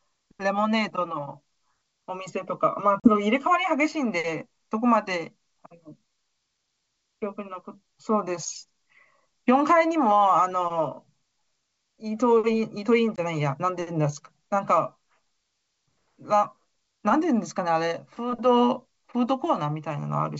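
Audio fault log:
3.00 s and 13.16 s, packet loss on an ADPCM call: 40 ms and 20 ms holes of silence, then the desynchronised decoder's predictor makes speech resume with brief distortion.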